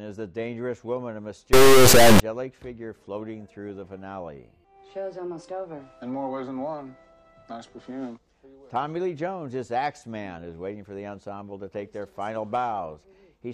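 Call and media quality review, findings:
Integer read as float, 1.53 to 2.20 s. Decoder or format-conversion stage treating 32-bit integer samples as 32-bit float. Bit patterns reinterpreted yield near-zero, invalid or hugely over-range values; output slams between silence and clip ceiling. Symptom: extremely loud buzzing square-wave noise across the span, falling to silence wherever the underlying signal goes very quiet. Check sample-format negotiation between producer and consumer at that point.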